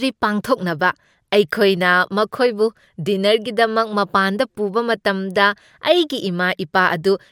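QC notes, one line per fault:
No technical faults are audible in the signal at any point.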